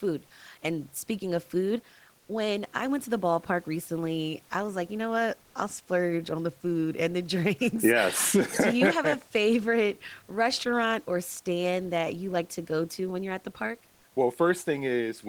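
At 5.43 s, after "like you know what" and before "I'll splurge on the", comfort noise takes the place of the background for about 110 ms. The room noise, normally about 36 dB below the speech, is briefly swapped for a smooth, featureless hiss. Its level shifts by only about 1 dB, so the change is subtle. The likely cause is discontinuous transmission, as in Opus DTX: the sender paused, and the receiver filled the gap with synthetic noise.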